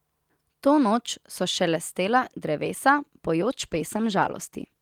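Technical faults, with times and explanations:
3.43 s to the end, call bitrate drop: the speech stays continuous but turns rough and muffled. That fits an encoder squeezed from about 48 to 15 kbps, bottoming out for 1.28 s. Unlike packet loss there are no gaps, only coarser coding and missing high frequencies.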